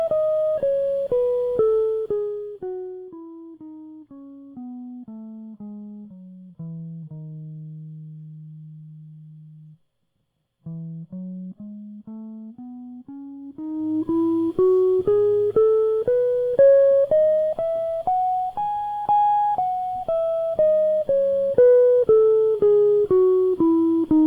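Zipper noise runs from 1.78 to 3.11 s as the music drops by roughly 25 dB, and again from 13.41 to 14.19 s as it rises back by a similar amount. The gain moves in unsmoothed jumps, around a hundred per second, each leaving a small click that builds into a fast ticking buzz over the music.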